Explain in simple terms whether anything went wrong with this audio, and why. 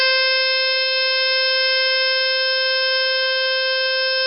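Heavy MP3 compression, likely starved of data, affects the music from start to finish, removing everything above 5.5 kHz and leaving it dull and watery.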